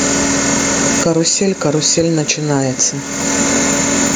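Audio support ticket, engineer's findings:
Gain pumping throughout: gain ducks around 20 dB under loud syllables, dynamics squashed. Likely excess mic gain, fast limiter clamping each peak.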